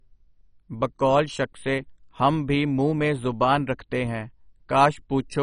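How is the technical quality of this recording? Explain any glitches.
The recording's technical quality is poor, with heavy codec damage throughout.

MP2 compression is the likely cause throughout. Starved sub-bands vanish above 10.4 kHz and the rest quantise coarsely, so speech sounds dull and gurgling, unlike a clean low-pass.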